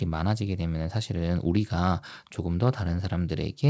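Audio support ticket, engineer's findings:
No audible faults found.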